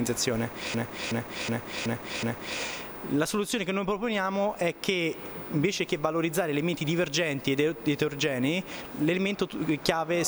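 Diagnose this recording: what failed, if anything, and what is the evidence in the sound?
A system hang loop at the driver/buffer stage: from 0.74 to 2.60 s, one 0.37 s chunk repeats five times, a stutter at about 2.7 Hz. This fits a 16384-sample ring buffer replayed while the host stalled. Little or no audio appears lost.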